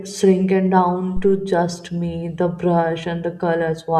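At 1.17 s a phantom power thump lands in the speech. A supply switching on or off on the live input sends a voltage step through the coupling capacitors, producing a deep, dull thud peaking at about -13 dBFS, which settles within 77 ms and leaves a low tail to 1.51 s. Unlike a plosive pop, it arrives independently of the speech's rhythm and consonants, and unlike handling noise it is one clean electrical step with no rustle or friction.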